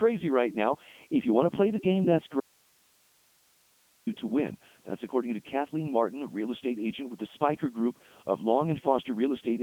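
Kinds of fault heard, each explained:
Codec 2 vocoder: speech was rebuilt from pitch, voicing and envelope at a rate fitting 3.2 kbit/s, so it sounds robotic and buzzy, band-limited to 150–3400 Hz, nothing above 3.5 kHz.
Audio dropout to a faint residue: the signal was likely lost while the path stayed live, so from 2.40 to 4.07 s speech cuts abruptly to hiss about 40 dB down.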